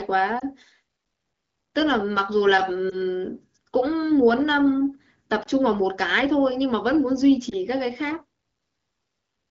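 Lost AMR speech frames occur four times, at 0.39–0.44 s, 2.90–2.97 s, 5.43–5.47 s and 7.49–7.54 s. Each is a brief dip or warble, consistent with a single 20 ms frame failing its checksum. The decoder bridges the gap by repeating the previous pitch and vocal tract settings at reduced gain, and the speech then recovers with a momentary roughness. The surrounding AMR-WB coding sounds clear, consistent with a rate around 12.65 kbit/s.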